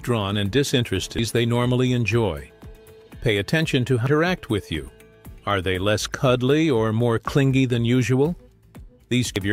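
Damaged data in a compressed stream at 1.19 s, 4.07 s and 9.36–9.45 s makes the decoder lose sync: brief chirps, squawks, clicks or short holes, seen as broadband vertical smears and waveform discontinuities.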